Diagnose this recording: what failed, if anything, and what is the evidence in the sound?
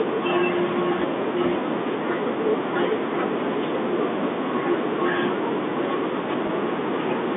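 The network stage failed briefly. From 6.47 to 6.49 s, about 20 ms of speech drops out, which fits two lost 10 ms packets. The receiver conceals it with packet loss with pitch repetition, looping the last pitch period into a short, buzzy hold.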